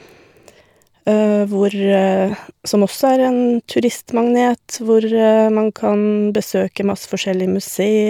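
No technical fault can be heard anywhere in the recording; the speech signal stays intact and continuous throughout.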